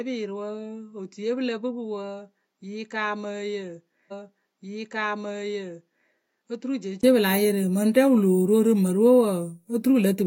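A speech recording that, from the start to 7.03 s, sounds duller and about 10 dB quieter, with nothing above 7.6 kHz and a faint new noise floor far below the speech, most likely because the input had switched to a poorer device. A 20 ms gap at 7.03 s precedes the return to full bandwidth. A spectrogram shows a flat ceiling at 7.6 kHz that lifts there, and the waveform grows taller. A stream segment is repeated from 4.08 to 6.08 s, adding about 2 s, with a small blip at the jump back. On a spectrogram or waveform, the same two-second pattern appears twice, side by side.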